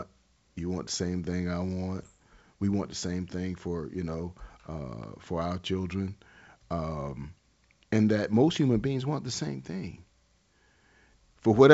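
At 1.96 to 2.09 s, just after "the same thing I", and again at 9.37 to 9.50 s, after "human beings want the", bit errors on an ADPCM link cause short pops and gritty bursts. Each flipped bit corrupts the decoder's step size and predictor, so the damage rings on for several milliseconds with brief level jumps. Unlike packet loss, the sound never drops out or gets smoothly patched. The G.722 coding carrying it keeps its clean 7 kHz bandwidth.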